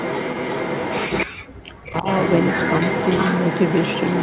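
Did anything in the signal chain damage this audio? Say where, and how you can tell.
Yes. Echo leak runs from the start to 1.26 s and again from 1.96 s to the end. A delayed copy of the speech trails it by about 338 ms, only a little quieter than the original. This points to call processing, likely a loudspeaker-side echo canceller passing its microphone pickup back.

Speech suppressed in double talk occurs at 1.52 to 1.58 s and 1.79 to 2.07 s. The speech drops out in short holes, roughly 40 dB down at the deepest. The echo canceller likely mistook the talker for echo and attenuated both.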